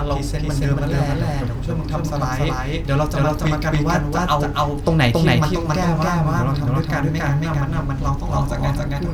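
From start to finish, the speech carries a doubled audio track: a second, equally loud copy trails by about a third of a second, likely from the same signal being captured twice. Unlike room echo, this copy is full-band, single, and never decays.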